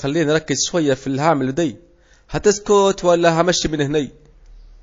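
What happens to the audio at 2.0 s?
At 2.0 s, as throughout the clip, the speech sounds watery, likely from MP3 compression at a low bitrate near 32 kbps, with weak components dropped.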